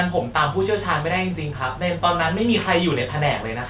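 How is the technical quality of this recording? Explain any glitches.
No audible glitches or faults.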